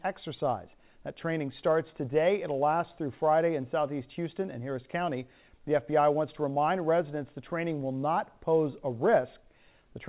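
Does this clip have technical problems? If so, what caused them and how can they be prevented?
No, there are no technical faults to point to here. The sound has passed through a call path, and its narrow telephone-band character, with nothing above 4 kHz, fits a G.711 A-law connection at 64 kbps working as designed.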